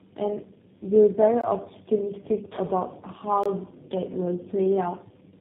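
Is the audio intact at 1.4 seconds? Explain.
No. From 1.41 to 1.44 s there's a gap between chunks, about 21 ms of hard-edged silence where playback seems to start the next 2-second chunk late. That moment also carries tandem speech coding: the speech sounds rough, muffled and warbly, with nothing above 3.8 kHz, as if re-encoded through three low-rate speech codecs in a row.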